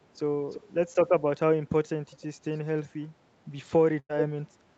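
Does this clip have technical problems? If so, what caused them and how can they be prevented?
Yes. From 0.50 to 0.61 s a faint delayed copy of the speech trails the original by about 340 ms. This is likely an echo leak, where a far-end loudspeaker's sound got past the echo canceller and was sent back. Prevention: use headsets or better acoustic echo cancellation at the loudspeaker end.

From 3.99 to 4.11 s a burst of packet loss occurs. About 98 ms of held, fading sound fills the gap, and roughly 100 ms of speech is lost. Prevention: improve network stability or add forward error correction and jitter buffering.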